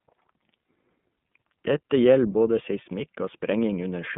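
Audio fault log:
Throughout: iLBC codec. The speech is confined to roughly 150 Hz to 3.5 kHz and sounds plainly rough and synthetic. Each block of excitation is coded independently, consistent with 30 ms frames, and the coarseness fits the 13.33 kbps mode.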